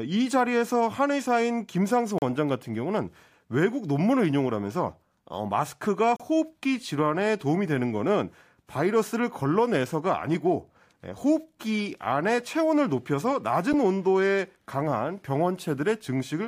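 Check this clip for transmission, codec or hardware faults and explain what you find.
Three blocks of digital silence interrupt the speech: brief holes at 2.18 to 2.22 s (36 ms) and 6.16 to 6.20 s (32 ms), and a tick at 13.73 s. Each time the audio cuts out and back with no fade, as happens when the output buffer isn't filled in time.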